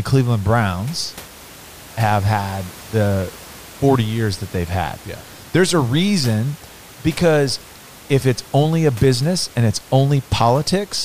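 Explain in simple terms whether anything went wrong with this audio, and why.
Nothing went wrong with this speech recording; the faint background noise you can hear sitting well under the talking is just the room itself, not something the system did.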